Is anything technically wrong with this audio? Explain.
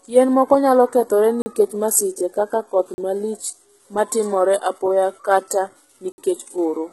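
Yes. Throughout, the treble below a ceiling near 11.8 kHz is heavily damaged: sibilants sound metallic and lispy. This is likely HE-AAC compression at a low bitrate around 16 kbps, rebuilding the upper band from copied lower bands rather than simply filtering it off.

There are three blocks of digital silence: 40 ms at 1.42 s, after "moko nyalo kethore"; 40 ms at 2.94 s, after "masiche kaka koth"; and 60 ms at 6.12 s, after "ma timore apoya kata". Unfilled buffers cut abruptly to silence, unlike concealed dropouts, which fade or repeat sound.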